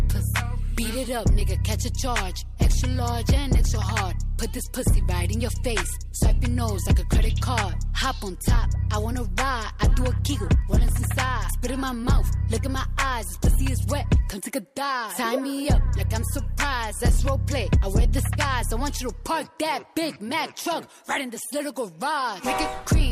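At 9.11 s there is a repeated buffer. New audio arrived late, so a 1.3 ms piece, which fits a 64-sample buffer, played twice. It gives a click. At 10.88 s one piece plays five times in a row, heard as a brief buzz.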